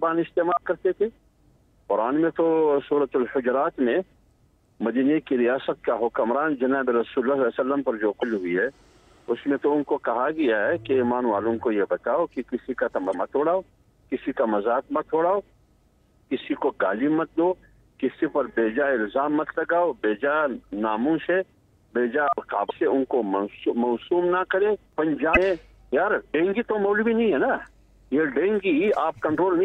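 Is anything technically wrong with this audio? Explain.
Yes, damaged data in a compressed stream at 8.19–8.24, 13.10–13.15, 22.66–22.71, 25.33–25.37 and 29.35–29.40 s. Corrupted bytes derail the decoder's framing, producing a brief chirp, squawk, click or short hole.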